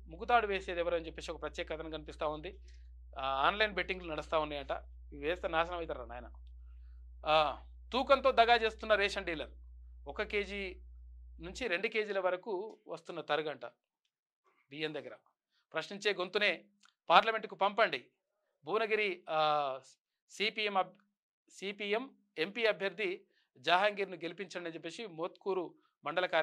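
From the start to 11.64 s, a steady mains hum sits under the sound: a fixed low tone at 60 Hz with a few low harmonics, roughly 20 dB below the programme. A ground loop or a nearby transformer has let the power line leak into the signal path. Unlike low-frequency rumble, which wanders and has no clear pitch, this hum holds one exact pitch and never changes level until it stops.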